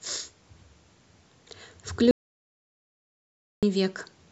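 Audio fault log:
2.11–3.63 s, audio dropout to silence: the speech stops mid-flow and the signal falls to silence, with no room tone or background hiss beneath it, for about 1.5 s before the speech resumes abruptly. The cause is likely a momentary loss of the input, such as a disconnected device, a failed link or a stray mute, while recording carried on writing silence, so whatever was spoken in that stretch is gone.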